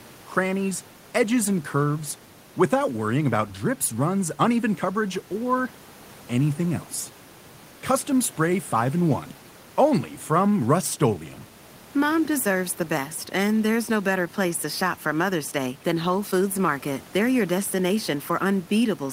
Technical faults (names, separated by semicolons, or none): none